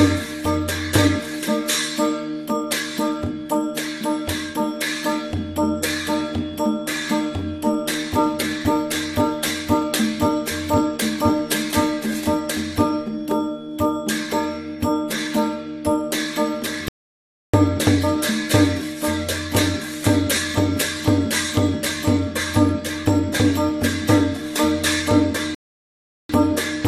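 Two rebuffering stalls interrupt the audio, at 16.88 to 17.54 s and again at 25.55 to 26.30 s. Each time, playback drops to silence and then picks up at exactly the point where it stopped, so no material is lost, but about 0.65 s and 0.75 s of dead air are inserted. The player exhausted its downloaded buffer and waited for more data to arrive before continuing.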